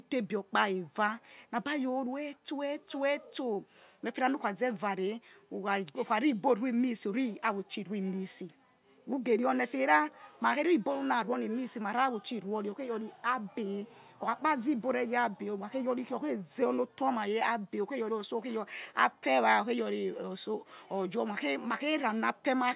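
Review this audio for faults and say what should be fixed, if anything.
No faults turn up in this audio, so nothing needs to be fixed.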